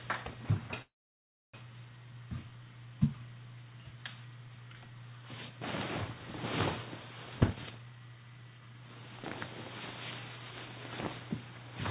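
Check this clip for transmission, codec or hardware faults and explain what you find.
Two faults show up in this recording of everyday sounds, both tied to the call path. The audio carries nothing above 4 kHz, which fits G.711 A-law at 64 kbps.

From 0.82 to 1.55 s there's a call audio freeze. The audio stalls, carries on briefly as a fading tail, then drops to near silence for about 0.65 s before resuming exactly where it left off. The likely cause is packets held up in transit, so the jitter buffer ran dry and the receiver padded the wait. About 0.71 s of extra time got inserted, but nothing was lost.

From 7.25 to 9.48 s there's a jitter buffer speed-up. The sounds run at roughly 132% speed without any pitch shift, so everything feels rushed and squeezed together. The buffer had built up more audio than it wanted, probably after delayed packets arrived together, and the receiver clawed back the delay by snipping out many tiny pitch-period-sized slices in quick succession. 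That trimmed somewhere around 0.7 s in total.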